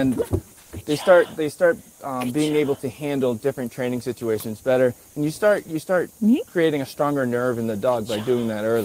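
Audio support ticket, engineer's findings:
Comfort noise in place of the background, 0.59–0.71 s: real background swapped for flat, featureless hiss about 2 dB quieter. Likely discontinuous transmission, Opus DTX-style.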